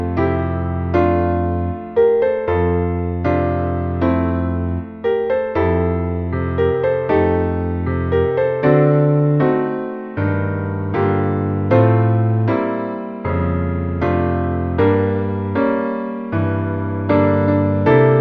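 No technical faults can be heard anywhere in the recording, and the signal stays steady and intact throughout.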